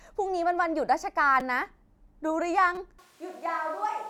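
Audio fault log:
1.40 s and 2.75–2.77 s, repeated buffer: brief clicky buzz as a 5.33 ms slice replays two then four extra times, which fits a 256-sample buffer arriving late.
2.99 s to end, switch to a distant microphone: speech turns suddenly hollow and roomy, thinner, roughly 10 dB quieter with audible room noise, likely from losing the close microphone.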